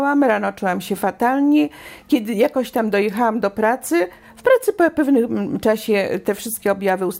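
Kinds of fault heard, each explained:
No audible faults detected.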